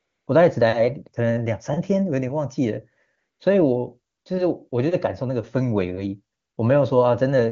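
Speech carried over AMR-WB (HD Voice), clean enough to suggest its top rate, has AMR comfort noise at 0.00–0.27, 3.17–3.39, 4.13–4.25, 4.69–4.71 and 6.37–6.57 s, where speech frames stopped and steady synthetic noise replaced the real background.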